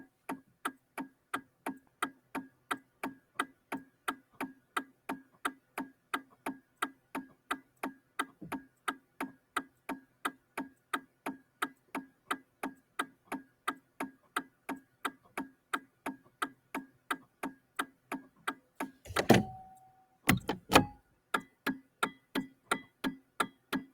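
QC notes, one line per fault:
Throughout: noise suppressor applied to music or sounds. Held and steady parts sink and recover while attacks pass, so the level pumps and thins, swinging by roughly 15 dB. A suppressor tuned for speech treats this steady material as noise and keeps turning it down.
0.08–8.18 s, 8.69–15.04 s, 15.55–18.79 s, 20.06–20.26 s, 21.03 s to the end: sound cut by the noise suppressor. Sustained and decaying sound dips by up to about 9 dB, with tails cut short, for several seconds in the longer spans. The suppressor judged these stretches to be noise and attenuated them harder than the rest.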